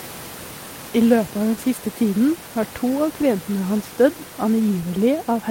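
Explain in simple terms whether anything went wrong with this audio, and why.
Nothing went wrong with this recording. There is some background noise from the room, sitting well below the speech, but that comes from where the microphone was and is a normal part of the recording.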